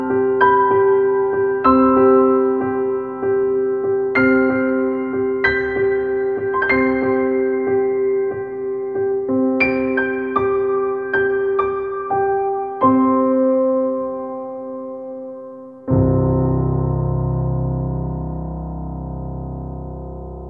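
No technical faults can be heard anywhere in the audio.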